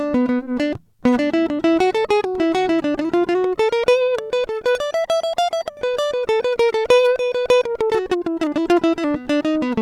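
No technical faults can be heard anywhere in this music.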